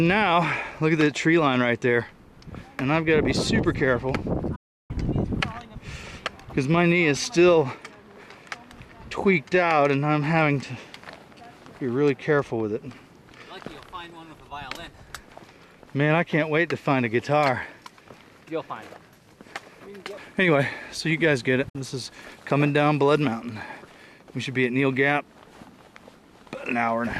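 Two digital broadcast dropouts punch holes in the audio. The first runs from 4.55 to 4.91 s, a gap of about 336 ms, and the second is a short 48 ms blip at 21.69 s. Each time the sound dips to silence over a quick fade of about 8 ms and then comes back later in the programme. That's the receiver muting while frames fail to decode, so whatever was sent during those gaps is simply gone.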